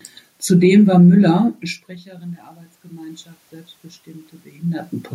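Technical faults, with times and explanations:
1.28–4.93 s, automatic gain rising: after the input fell by about 20 dB as the talker moved back from the microphone, the gain control slowly raised its gain by about 8 dB, so the voice and the room noise swell together over nearly four seconds.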